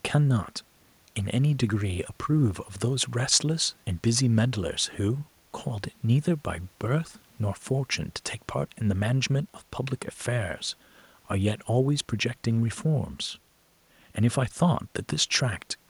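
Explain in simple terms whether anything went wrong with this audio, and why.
Nothing went wrong here: the speech shows no audible faults at any point in the recording.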